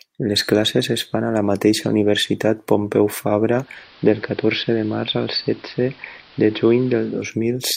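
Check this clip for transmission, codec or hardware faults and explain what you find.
One fault: a digital radio blending to analogue, from 3.49 s to 7.34 s. The receiver lost its digital stream and cross-faded over 366 ms to the AM broadcast, so the speech turns dull, drops about 1 dB, and gains steady hiss well below the speech. The smooth fade and the return to clean sound mark it as a blend, not a codec dropout.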